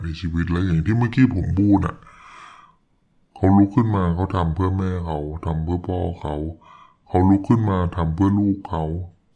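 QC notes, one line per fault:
throughout wrong sample rate: audio played back slower than recorded, consistent with 32 kHz material run at 22 kHz, so speech drags at 0.69 speed and drops about 6.5 semitones.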